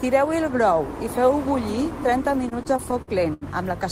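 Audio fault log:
2.49–3.43 s, repeated stalls (stutter): the speech drags and hiccups through seven short holds of up to 79 ms as a repeatedly emptied jitter buffer stretched the last sound.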